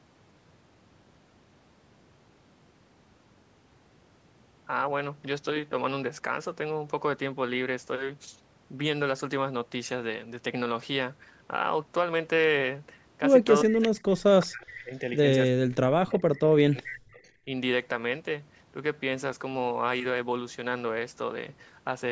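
From 13.63 to 15.11 s, the speech drops by about 35 dB and breaks up. This is likely speech suppressed in double talk: the echo canceller mistook overlapping talk for echo and turned it down.

At 13.82 to 13.88 s and 14.68 to 14.72 s, brief faint scraps of the voice return 380 ms late, about 20 and 25 dB below the speech. This is likely an echo leak, where loudspeaker sound slipped past the far side's canceller.

The same suppression returns from 15.52 to 16.28 s and from 16.6 to 17.51 s. Here the speech dips by about 40 dB in pieces.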